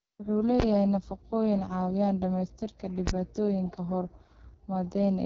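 Throughout, the speech carries heavy AMR wideband (HD Voice) codec damage: rough, raspy texture with nothing above 7.5 kHz, which fits the lowest 6.6 kbit/s mode. At 0.60 s and again at 3.07 s, invalid numbers at full scale force the output to one extreme value for about 20 ms, each heard as a single loud bang.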